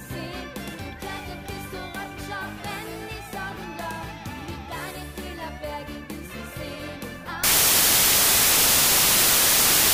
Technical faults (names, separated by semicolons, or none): wrong sample width